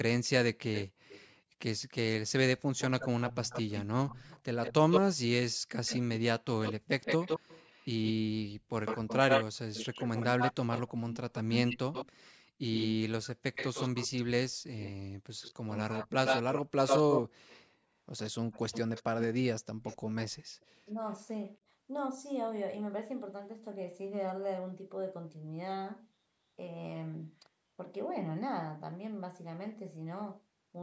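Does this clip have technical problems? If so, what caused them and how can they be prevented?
Yes. A delayed copy of the speech trails it at 0.23–1.27, 2.77–5.01, 5.86–5.99, 6.63–8.13, 8.85–14.08, 14.8–19.25 and 19.84–20.65 s. It lags by 107 to 267 ms and ranges from faint to about as loud as the speech itself around 14.8–19.25 s. This is echo leak, likely from the other side's loudspeaker output slipping past its echo canceller and being sent back. Using a headset at the loudspeaker end, or a better-converged echo canceller there, would keep the played-back audio out of the return path.

At 20.93 s the speech briefly dips by a few decibels for about 50 ms. This is speech suppressed in double talk: the canceller likely could not tell the talker from the loudspeaker echo while both sides spoke, and turned both down. An echo canceller with stronger double-talk detection, or a headset that removes the echo in the first place, would prevent the dip.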